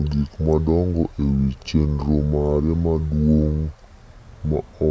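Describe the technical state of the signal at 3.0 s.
At 3.0 s the speech is affected by a wrong sample rate that runs through the whole clip. The sound plays at about two-thirds speed and roughly 7 semitones low, which fits 24 kHz audio played at 16 kHz. The speech sounds slow and deep. On a spectrogram, harmonics and formants sit lower and are stretched in time. The waveform's syllables look drawn out.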